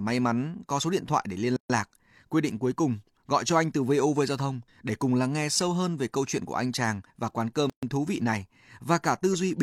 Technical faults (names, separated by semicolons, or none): gap at a join of encoded pieces